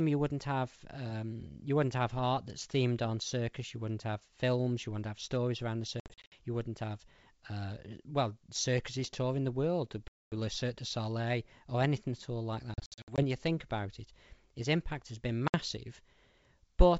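Packet loss on an ADPCM call strikes the G.722 stream (wideband speech at 64 kbit/s) four times. Lost packets become hard-edged silences, and the decoder's predictor and step size drift from the sender's, so speech resumes briefly distorted. At 6.00–6.36 s, after "have stories around the", 200 ms vanishes in scattered runs up to 60 ms. At 10.08–10.33 s, 240 ms drops. At 12.74–13.23 s, between "anything at all like" and "you think about it", 240 ms is lost across 440 ms. At 15.48–15.59 s, after "his impact has been", 60 ms is lost.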